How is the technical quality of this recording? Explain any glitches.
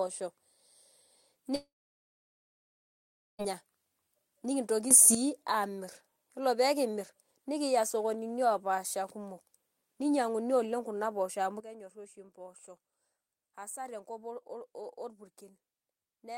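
The recording has two kinds of glitch: one long dropout near the start and two abrupt level changes later.

A long network dropout runs from 1.55 s to 3.42 s. About 1.84 s of speech never arrived, likely because packets were lost in transit. The receiver tried to bridge the gap by extending the last sound. That filler fades within a moment. Then about 1.7 s of near silence follows. The speech resumes with the missing part simply gone.

Two sudden gain jumps follow. The first lifts the level by about 10 dB from 4.91 s to 5.15 s, just before "amir yiolo pekimir nikiya". The second drops it by about 12 dB at 11.60 s, right after "kuna poosho amu", and the quieter level holds to the end. Each is likely a gain setting applied instantly with no ramp. The speech and the background noise jump together, so the change is abrupt.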